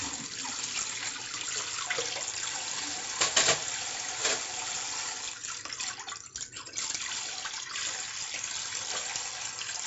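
From start to finish there's heavy 4-bit ADPCM compression. Each sample is stored as a coarse step from a prediction, so gritty hiss rides on every loud moment and sharp attacks crunch. Nothing reaches above 7.7 kHz, which fits a 64 kbps stream.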